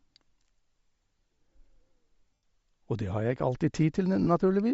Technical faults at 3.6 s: Bluetooth LC3 compression

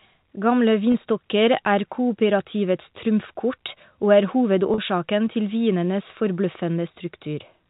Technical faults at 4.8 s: packet loss with pitch repetition

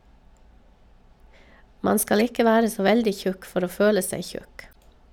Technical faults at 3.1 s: none

